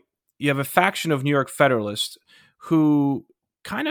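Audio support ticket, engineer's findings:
Nothing stood out on listening to this speech clip.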